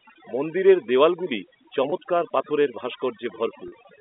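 From the start, and for the whole clip, overdone noise removal is at work. The noise reduction was set too strong. It pulls individual frequency bands down hard whenever they sit near its noise estimate. Quiet parts of the speech go with the noise. Pauses drop to near silence with twinkling specks. This sits inside a telephone band of about 250 Hz to 3.6 kHz, which fits G.711 A-law coding.

At 1.90 to 1.92 s, right after "মন্দিরের দেওয়ালগুলি", there is packet loss with pitch repetition. About 20 ms of audio is missing, which fits a single lost packet. The receiver fills the gap by repeating the last pitch period. It sounds like a brief, slightly held buzz. At 3.68 to 3.72 s a longer gap of about 40 ms, which points to two packets, is bridged the same way. There the repeated cycle fades down before the speech returns with a short cross-fade.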